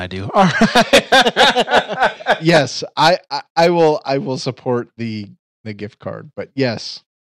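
Speech with hard clipping at 0.36–2.62 s, 3.01–3.13 s and 3.59–3.90 s, before "I will support the". Overloaded about 13, 9 and 7 dB, peaks flatten, adding high harmonics.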